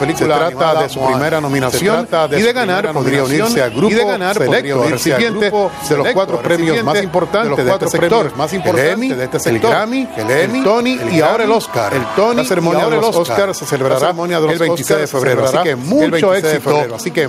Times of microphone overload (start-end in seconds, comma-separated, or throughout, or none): none